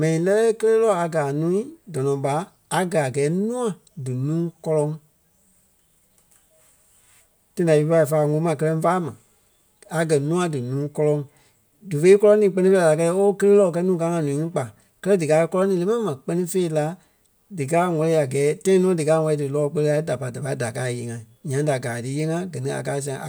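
Nothing goes wrong anywhere in this speech recording, so there's no technical fault to point to at any moment.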